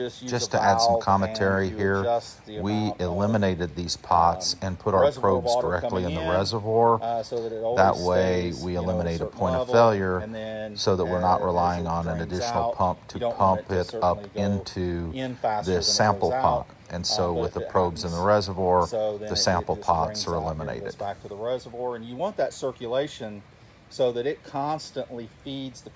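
No technical faults are audible.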